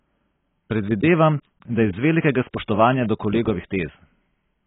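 Speech throughout carries heavy AAC compression damage. The top of the spectrum is gone, with nothing audible above 3.8 kHz, so the sound is dull and sibilants lose their edge. The remaining bands are coarsely quantised, which smears the signal and gives sustained sounds a warbling, fizzy texture across the whole clip. That low cut-off and the depth of damage most likely come from AAC-LC encoding at a very low bitrate, which fits roughly 16 kbps.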